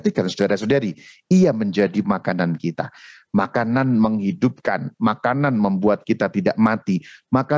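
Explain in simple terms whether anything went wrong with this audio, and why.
Gain pumping runs throughout: loud and soft parts end up closer in level and the sound is squashed, likely from input gain set too high, driving a fast limiter.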